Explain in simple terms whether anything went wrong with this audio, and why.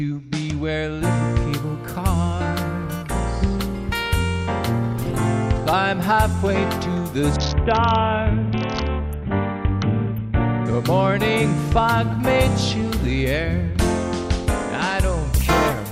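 From 7.36 to 10.66 s there is a Bluetooth SBC bit pool drop. A busy wireless link starved the audio of data, so it turned dull and gritty.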